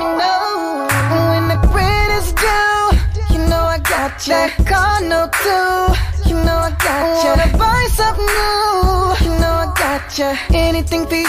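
Nothing here calls for comment, since the whole clip runs along without a single technical fault turning up anywhere.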